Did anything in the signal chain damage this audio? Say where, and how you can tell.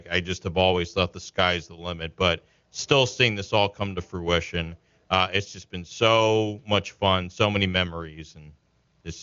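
No, the speech reaches no higher than 7.2 kHz, the band limit of an AMR wideband (HD Voice) link whose coding sounds like it is at or near its top rate, and nothing along the chain audibly damages it.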